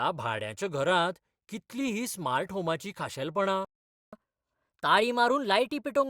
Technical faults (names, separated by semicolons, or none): playback stall; catch-up at higher speed